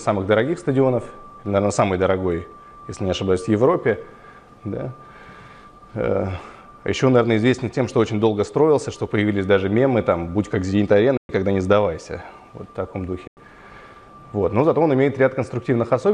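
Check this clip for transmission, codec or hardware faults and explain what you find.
Two short gaps break the sound, at 11.17 to 11.30 s and at 13.27 to 13.37 s. These are likely Bluetooth dropouts. Packets missed their delivery window and were discarded. Output fell silent for about 116 ms, then about 93 ms. Playback then resumed further along, with nothing held back.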